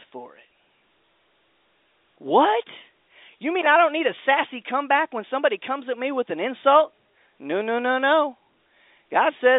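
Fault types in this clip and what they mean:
The speech comes over an ordinary G.711 A-law telephone path at 64 kbps. Its sound is confined to the usual line band of roughly 300 Hz to 3.7 kHz, with no technical faults to report.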